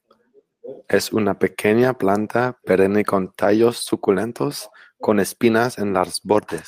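A lost packet rebuilt from error correction at 5.51 to 5.53 s in this speech clip leaves about 20 ms sounding briefly rougher and noisier, consistent with one packet replaced by its low-bitrate copy.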